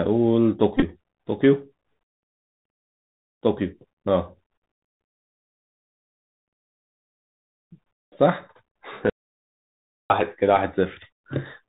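Bluetooth CVSD headset codec damage runs through the whole of this speech recording: the 64 kbit/s one-bit delta coding cuts everything above 4 kHz, leaves a granular hiss underneath, roughens s sounds, and smears loud bright peaks where the adaptive step cannot keep pace. Bluetooth headset packet repeats appear from 0.77 to 0.82 s, where about 41 ms of audio is lost across roughly 52 ms, which fits around eleven dropped voice packets. Each gap is filled by replaying the previous packet, so the longest stretch, about 20 ms, becomes a short buzz near 267 Hz. An audio dropout to silence runs from 9.10 to 10.10 s, a full second of silence with no room tone, and the sound stops and resumes abruptly. The likely cause is the input going away, through a lost link or a momentary mute, while recording continued.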